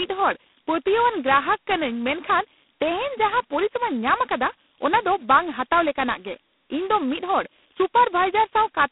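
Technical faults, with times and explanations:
Throughout, converter idle tones: a whistle around 5 kHz sits about 28 dB below the speech and turns grainy beneath quiet passages. An undithered delta-sigma converter locks into repeating bit patterns at low input, and those cycles emerge as steady tones.
Throughout, G.726 ADPCM at 16 kbit/s: a harsh, rasping hiss rides on the speech and rises and falls with its level. The band runs about 200 Hz to 3.5 kHz, and nothing passes above 3.9 kHz. Coding only about two bits of prediction error per sample leaves heavy quantisation noise.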